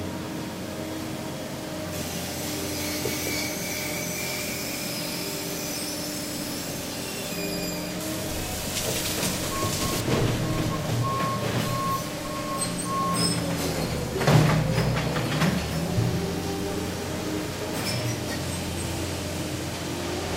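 Between 8.01 and 10.01 s the sound turns thin and hissy: pre-emphasis left on, a CD-style 50/15 µs treble lift never undone, leaving 10 kHz about 8 dB too hot.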